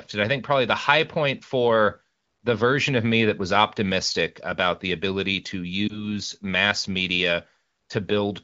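At 5.88 to 6.07 s the speech has a lost AMR speech frame. A radio error corrupted it, so the decoder repeated the previous pitch and vocal tract settings at lower gain. It sounds like a brief dip or warble, consistent with one 20 ms frame, over light AMR-WB coding.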